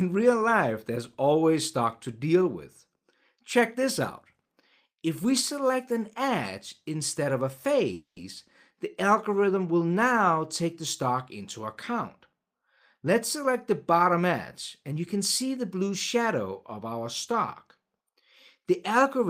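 The audio stops moving forward at 7.93 s. For about 230 ms the last sound is held and extended as a fading buzz or hiss, and the final 80 ms are silent. Playback then resumes at 8.18 s exactly where it left off, so nothing is lost but everything after it arrives 230 ms later. This is a call audio freeze, likely caused by packets stalling in transit until the jitter buffer ran dry and the receiver had to fill the gap itself. From 12.33 to 14.22 s the audio plays at about 106% speed with no change in pitch, and again from 14.82 to 16.22 s at about 105%. These are jitter buffer speed-ups. Likely after delayed packets arrived in a bunch, the buffer was holding more audio than its target, so the receiver trimmed out many short pitch-period slices to catch up. The first stretch cuts roughly a tenth of a second and the second somewhat less, which makes those sections sound slightly rushed.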